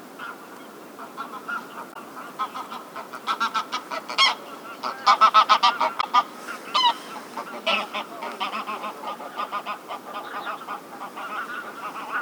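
At 1.92–1.97 s and 6.00–6.04 s, damaged data in the compressed stream makes the decoder misread frames and lose sync, giving short blips.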